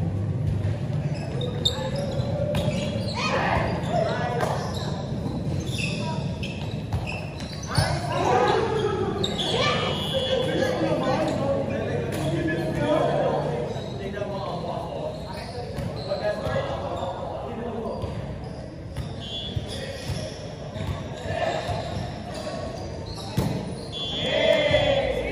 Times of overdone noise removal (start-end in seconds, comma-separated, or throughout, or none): none